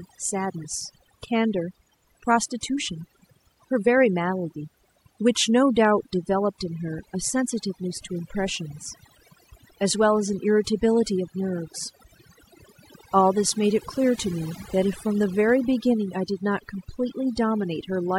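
Throughout the speech, the background drops to near silence flecked with twinkling specks: overdone noise removal, switching off frequency bands near the noise estimate.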